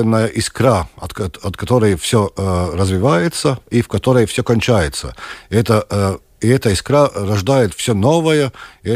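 Speech recording with no audible technical faults; the signal holds steady throughout, with no dropouts, interruptions or level problems to point to.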